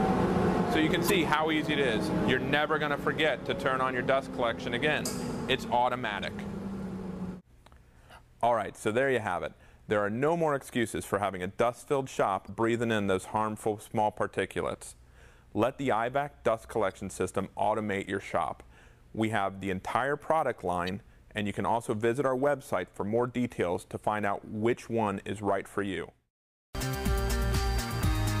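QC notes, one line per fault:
1.06–1.10 s, 6.23–6.25 s, 12.45–12.49 s, 16.91 s, 20.87–20.89 s: damaged data in a compressed stream. Corrupt bytes make the decoder misread frames and lose sync, so each spot is a brief chirp or blip.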